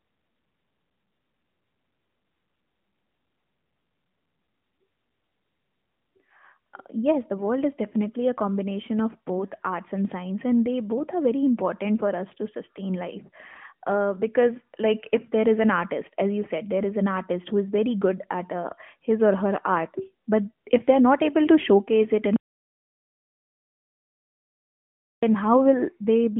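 At 22.36 s the speech cuts off mid-flow and the audio drops to silence, with no room tone left, on the narrowband mobile line, which carries nothing above about 3.7 kHz, until it resumes at 25.23 s. This is an audio dropout to silence lasting about 2.87 s. The likely cause is a brief loss of the input signal while the recording chain kept writing silence, so whatever was said in that span is gone.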